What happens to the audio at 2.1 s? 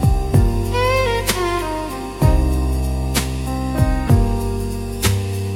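Nothing goes wrong at 2.1 s; the audio there plays through intact, with no dropout, click, glitch or other fault.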